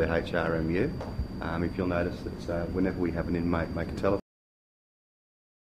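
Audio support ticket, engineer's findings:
Cut-off end at 4.20 s. Sound stops mid-event and drops straight to digital silence, which holds for the remaining 1.5 s. Probable component: playback or capture buffer handling at stream close. Mechanism: final buffers never written or flushed before the stream shut down. Distinguished from a natural ending or fade-out by the absence of any decay or reverb tail and by the abrupt silence after the cut.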